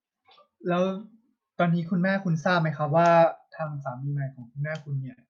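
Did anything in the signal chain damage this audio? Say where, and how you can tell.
Yes. At the network and jitter-buffer stage, clock drift between sender and receiver is audible. The sender's clock runs roughly 4 percent slow, so the buffer keeps draining.

Repeated timing corrections run from 0.00 to 4.57 s. The receiver repeats small pieces, playing at 98 percent speed and adding about 70 ms.

Scattered short gaps appear between 0.10 and 3.68 s. About ten brief holes, the longest around 15 ms, were patched by continuing sound. They come through as brief ticks and smears.

Two short stalls from a late packet occur at 4.40 s (16 ms) and 5.13 s (40 ms). The buffer ran empty, so the last sound is held, with a slight buzz or dip.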